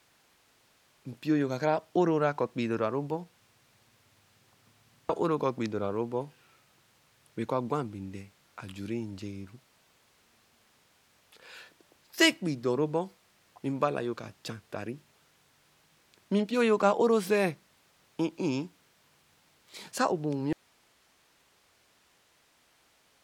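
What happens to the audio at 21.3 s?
At 21.3 s you're inside an audio dropout to a faint residue that starts at 20.53 s and runs to the end. The speech cuts out abruptly, leaving only hiss roughly 35 dB below the signal, likely because the source was lost while the downstream path stayed live.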